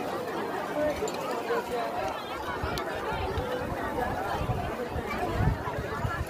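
Nothing stood out on listening to this clip.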